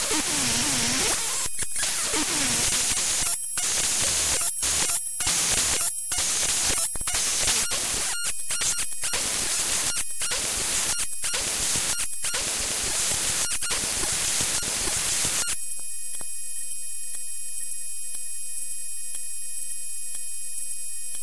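No technical faults are audible.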